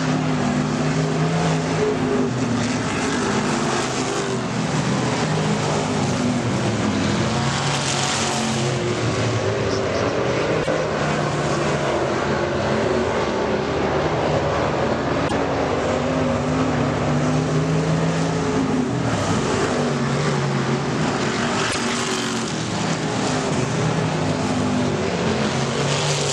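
At 10.59 to 10.68 s, 15.24 to 15.32 s and 21.67 to 21.75 s come brief bursts of damaged data in a compressed stream, each about 80 ms. Corrupted bytes make the decoder misread those frames and lose sync until it locks onto the next valid frame header, producing a short chirp, squawk, click or short hole.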